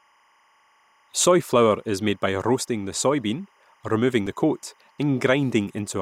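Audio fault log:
Throughout: timecode bleed. Linear timecode running at 25 frames per second is leaking from an adjacent track or cable into the audio path. Its square-wave signal flips between two pitches near 1 and 2 kHz, sitting roughly 40 dB under the speech. Because the code never stops, it forms a faint, steady chirping warble behind the speech.
4.27 s: dropped buffer (overrun). The likely cause is that the recording software fell behind and the hardware overwrote a block of samples before they were read, so a sliver of audio, well under two milliseconds, vanished and the surrounding samples were spliced together with no gap. The abrupt join in the waveform falls between "roasting the soybean removing" and "the coat", with a skip forward.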